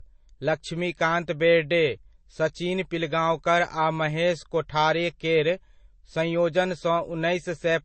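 Across the whole recording the speech carries layered codec artefacts, most likely from transcoding between lossy codecs, with a low-rate MP3-style encode followed by a Vorbis-style one. Nothing survives above 8.3 kHz, so the sound is dull and band-limited, with the different codecs' artefacts heard together. On a spectrogram the energy stops at a hard shelf near 8.3 kHz, and beneath it there are patchy, blocky holes and streaks where the second encoder spent bits re-coding the first one's damage.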